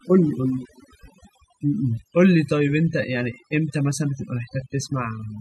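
Overdone noise removal runs through the whole speech clip. A noise reduction stage was set far too aggressively. It pulls individual frequency bands down hard whenever they sit close to its noise estimate. Softer parts of the voice fall below that line and vanish with the noise. Between phrases the background drops and breaks up into twinkling, warbling specks.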